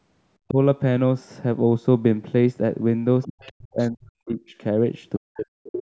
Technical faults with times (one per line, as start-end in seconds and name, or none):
0.48-0.58 speech suppressed in double talk
3.23-3.52 other side's voice leaking through
3.26-4.53 speech suppressed in double talk
3.79-3.89 other side's voice leaking through
5.19-5.96 speech suppressed in double talk